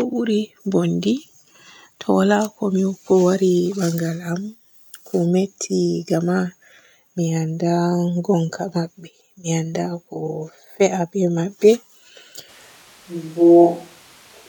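At 12.5 s the speech suddenly turns roomy and hollow, with thinner bass, though the level barely changes, and it stays that way to the end. That's a switch to a distant microphone, likely the close mic dropping out, with room noise sitting roughly 35 dB under the speech.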